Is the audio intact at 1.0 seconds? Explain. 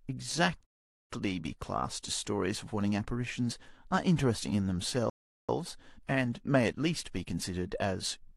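No, at 1.0 s the speech has dropped to silence, then resumes exactly where it stopped at 1.10 s: a rebuffering stall from 0.65 s, the player waiting for data, adding 0.45 s.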